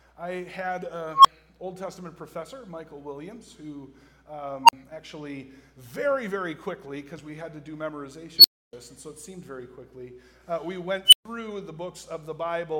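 An unstable filter fires four times, at 1.12, 4.63, 8.38 and 11.06 s. Each time, runaway feedback swells a tone, around 1 kHz, then 4 kHz, then 3 kHz, until it clips. Build-ups last 125, 54, 59 and 69 ms. The sound then drops out for 11, 43, 288 and 128 ms.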